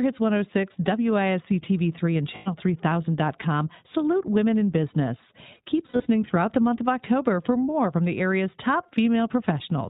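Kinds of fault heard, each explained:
iLBC codec: The whole recording has passed through iLBC, a narrowband VoIP codec that codes each frame's excitation independently of the previous frame. Nothing above 4 kHz survives, so the speech sounds band-limited and telephone-like, with a plainly audible rough, slightly synthetic texture. The character of the damage points to the 15.2 kbps mode with 20 ms frames, where the codec trades naturalness for frame independence.
Lost iLBC frames: Packets went missing and the decoder filled each gap by repeating the last pitch cycle blended with noise, which gives a held, faintly buzzy or breathy vowel. The first gap runs from 2.36 to 2.48 s, about 100 ms. The second is scattered over about 200 ms from 5.86 to 6.07 s, between "salute women in business" and "throughout the month of", with its longest run around 70 ms. Because iLBC frames stand alone, the sound recovers almost immediately after each gap.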